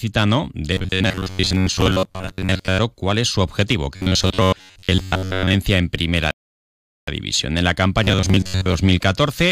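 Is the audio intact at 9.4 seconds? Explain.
Yes, the speech at 9.4 seconds is intact, with no dropout, click, distortion or other fault.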